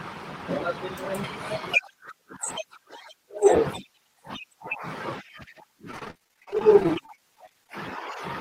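From 5.91 to 7.69 s the speech turns choppy and robotic. Repeated packet loss punches dozens of short holes, none longer than 33 ms, each patched by extending the preceding sound. Unlike a single dropout, these gaps recur rapidly, producing a choppy stutter with pieces missing.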